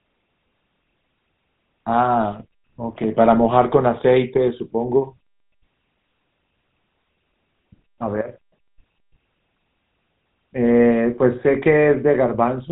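From start to finish, the speech runs through a GSM full-rate codec, whose damage is plainly audible. The codec models the vocal tract as a filter and excites it with a regular pulse train, retaining only one excitation sample in three. The roughness points to a rate of about 13 kbps. Everything above 4 kHz is gone, so the speech sounds narrow and dull, with a buzzy, gravelly grain.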